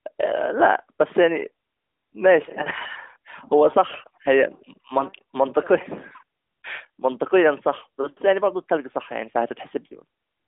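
Nothing goes wrong in this one; it's just ordinary speech heard over a narrowband mobile connection, and there's no fault to point to anywhere in it.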